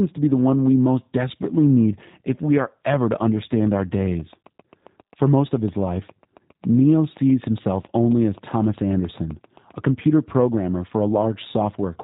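Speech runs through the G.729 codec for its whole length, and the coding damage is plainly audible: the voice has the rough, slightly synthetic texture that fits the 8 kbit/s G.729A variant, rebuilt from a vocal tract filter, a pitch predictor and a few pulses per subframe rather than the original waveform. On a spectrogram nothing rises above 4 kHz, leaving a hard ceiling with empty space above it, and the harmonics below look smeared and grainy. Just after "programmer for", from 11.22 to 11.25 s, there is VoIP packet loss concealed by the speech codec. The sound fits a single lost 10 ms frame. The decoder filled the gap by extending its last pitch and filter with falling gain, so the sound turns briefly buzzy and thin. Because each frame builds on the one before, the weakness lingers for a few tens of milliseconds after the gap. On the waveform this shows as a short dip in amplitude with an unnaturally regular, repeated cycle, and on the spectrogram as flat, stretched harmonic lines fading before normal structure returns.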